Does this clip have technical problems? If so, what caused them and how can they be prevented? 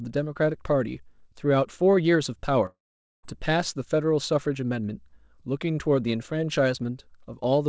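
Yes. From 2.66 to 3.25 s the speech gives way to a short buzz that fades out, then about 0.46 s of silence, and resumes with roughly 0.58 s of sound missing. The likely cause is a long network dropout: packets stopped arriving, so the receiver stretched the last sound until it ran out and then went quiet. A steadier connection, such as wired rather than congested Wi-Fi, would help prevent it.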